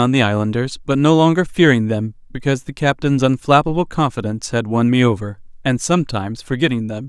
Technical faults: none

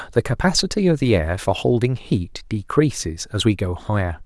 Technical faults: none

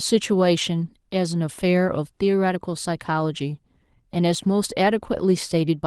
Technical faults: lost packet rebuilt from error correction; one channel drops out

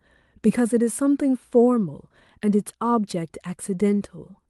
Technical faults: none

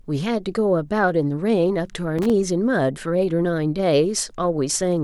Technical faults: loose connector crackle

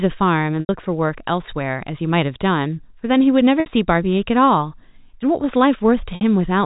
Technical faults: packet loss with pitch repetition

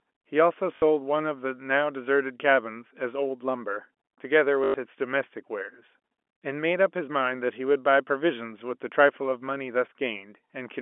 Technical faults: packet loss with last packet repeated

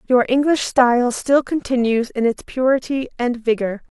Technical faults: none

